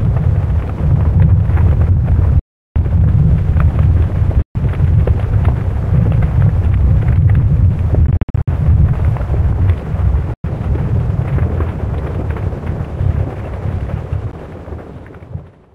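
The sound cuts out five times, at 2.39 to 2.76 s, 4.42 to 4.55 s, 8.07 to 8.48 s, 10.34 to 10.44 s, and briefly at 14.31 s. The edges are abrupt or fade over a few milliseconds. The sound resumes further along, as if it had kept playing. At 8.07 s the gaps are scattered, the longest about 58 ms. This is likely a Bluetooth dropout. Packets missed their slot and were discarded, leaving silence until good ones arrived.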